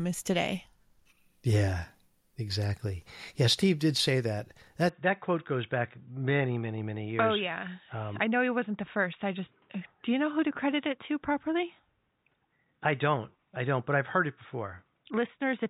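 At 4.89 s the speech abruptly turns dull and boxy and stays that way to the end of the clip, with no gap at the changeover. Nothing is present above 3.8 kHz from that point, the level drops by roughly 5 dB, and a faint new background noise appears well below the speech. This pattern points to the likely cause: the input switched to a poorer device, such as another microphone or a headset's narrowband call profile.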